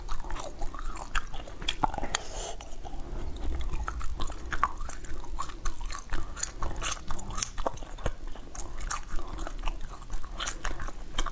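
A steady buzz at 50 Hz runs through the whole clip, present only while there is signal. It comes from the resampler restarting on every block: each 20 ms block, apparently converted from 44.1 kHz to 16 kHz, was handled separately, leaving an error at every block edge.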